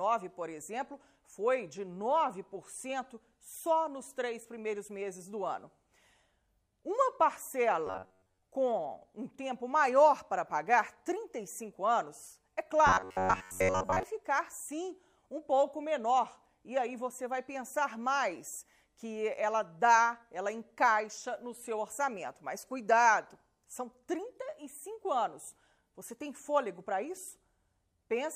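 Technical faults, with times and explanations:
7.87–8.43 s and 12.87–14.03 s, robotic sound from repeated short buffers: both stretches turn into a stiff, metallic buzz pitched at 93.8 Hz that only loosely tracks the underlying sound. What's likely going on is that fresh audio wasn't arriving fast enough, so playback kept looping the last chunk of roughly 10.7 ms, with most of the material in those spans being repeats. That repetition rate is what imposes the fixed buzz pitch.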